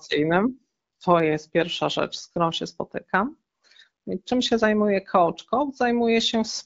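Nothing is technically wrong with this speech clip.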